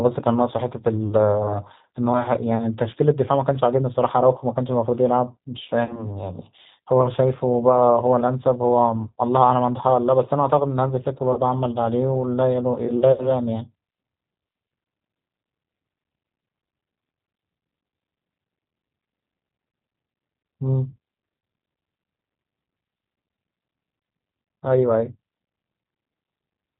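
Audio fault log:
Throughout: G.729 codec. Speech is squeezed to 8 kbit/s and rebuilt from a few pulses, so it sounds rough and synthetic, with nothing above 4 kHz.
1.43–1.59 s, 5.85–6.10 s, 11.33–11.40 s, 13.12–13.32 s: VoIP packet loss concealed by the speech codec. Gaps of 20, 40, 40 and 60 ms are filled by stretching the last sound into a fading buzz, and the voice stays weak a moment after.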